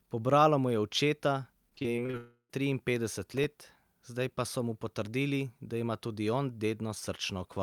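From 1.69 to 2.15 s, just after "mu je očeta", repeated packet loss (robotic sound) leaves short holes up to 31 ms, patched by repetition, so about 30% of the stretch sounds choppy.

From 2.17 to 2.51 s the audio turns into a fading buzz that ends in near-silence, then resumes with about 320 ms missing, likely a long network dropout.

From 3.34 to 3.83 s, just before "zdaj pa so mu", processor overload crackle sounds as gritty tearing. About ten missed deadlines each left a tiny silent gap, which fits a buffer of around 1.5 ms.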